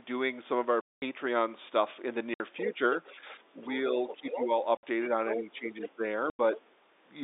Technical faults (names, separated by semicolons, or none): packet loss filled with silence; other side's voice leaking through; speech suppressed in double talk